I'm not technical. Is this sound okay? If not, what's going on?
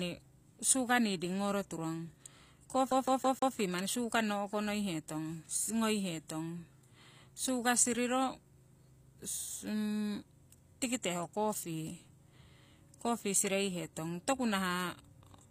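No. The treble throughout the speech is rebuilt rather than real: the s sounds come out gritty or metallic and nothing reaches above 15.5 kHz. This is likely HE-AAC compression. Unlike plain muffling, the top end is present but sounds synthetic and plainly damaged.

From 2.91 to 3.55 s, just before "manni sugarnno o'konoihetong", the same 160 ms snippet plays four times in a row, with a brief mute at each jump. This is a CD stuck on one turn. Unlike random glitches, the repeats are identical and evenly spaced.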